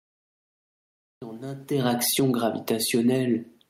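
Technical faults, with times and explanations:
0.00 to 1.22 s, cut-off start: Digital silence, then sound begins abruptly mid-sound at 1.22 s. Capture started late, so there is no natural onset.
1.71 to 3.69 s, automatic gain falling: The level sinks gradually to the end. The gain control judged the input too loud, or its background noise too strong, and pulled it down, taking the room noise with it.
2.33 to 3.58 s, automatic gain rising: Sound and background swell together by about 5 dB over more than a second. The gain control judged the input too quiet and raised it.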